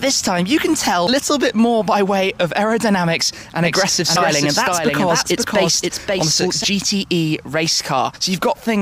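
At 1.07 s the first instance of damaged data in a compressed stream appears: corrupted frames make the decoder misread or drop data and lose sync until it finds a valid frame header, leaving a brief disturbance in the sound. From 3.65 to 6.64 s a doubled audio track is heard. A full-band copy trails roughly half a second behind at about 5 dB lower, with no decay or room colour, and it starts and stops abruptly. It is likely a second capture through a slower path or an edit holding two copies out of step. The same stream damage recurs at 4.16 s, 6.41 s and from 8.15 to 8.17 s.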